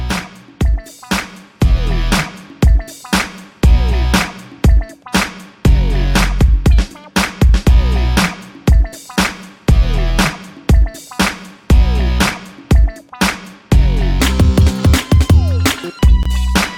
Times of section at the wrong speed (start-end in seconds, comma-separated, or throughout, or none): 14.20-15.99